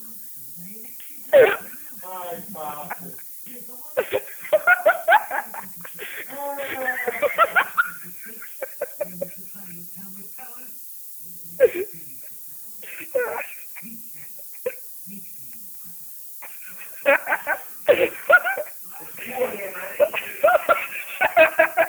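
From start to finish the audio shows low bit depth with noise shaping: it is quantised to 7 bits, and the rounding error is fed back so the noise moves upward in frequency. The result is a steady, thin hiss, roughly 15 dB below the signal, rising toward the top of the band.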